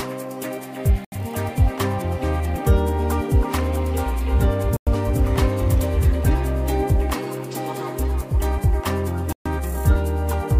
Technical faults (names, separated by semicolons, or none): Bluetooth stall